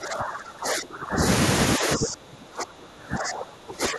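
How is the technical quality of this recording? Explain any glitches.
The technical quality is poor. The speech is repeatedly pushed down in level.

Speech suppressed in double talk occurs from the start to 1.22 s and again from 1.78 s to the end. The speech dips sharply, by as much as about 25 dB. Roughly a second is affected in the first stretch and about two seconds in the second. The likely cause is an echo canceller during double talk. Both ends spoke at once. It could not separate this talker from the returning loudspeaker echo, so it attenuated both.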